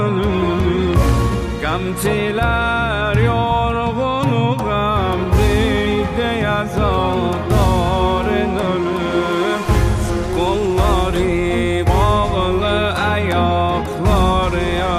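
Loud pops hit at 0.94–1.11 s (a double) and 13.31–13.33 s, likely from a plug or switch glitch, showing as sharp waveform spikes about 10 dB and 5 dB above the sound, with thin broadband vertical stripes on a spectrogram.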